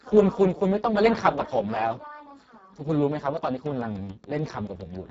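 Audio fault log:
throughout: Speex codec. Speech sounds hoarse, noisy and partly robotic, with nothing above 7.6 kHz. Heavy damage fits a setting near 5.8 kbps that starves the excitation.
3.66 to 4.97 s: train of clicks. About ten evenly spaced clicks, nearly seven per second, peak roughly at speech level. Likely caused by interference or a faulty connection.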